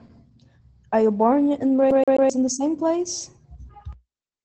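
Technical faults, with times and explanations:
Throughout, Opus voice compression: muffled, slightly hoarse speech with nothing above about 8.9 kHz, as a SILK coder, which fits roughly 12 kbps, narrows the band and coarsens the excitation.
1.91 to 2.30 s, CD stuck on one turn: after "you born and", a 130 ms snippet stutters three times with brief mutes, as a scratch throws the laser back each revolution.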